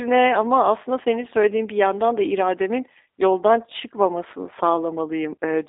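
Speech passed through the G.729 codec, which fits an 8 kbit/s G.729A link, rebuilds the signal from a filter, pitch predictor and sparse pulses, so it sounds plainly rough and synthetic, band-limited to 300 Hz–3.7 kHz throughout.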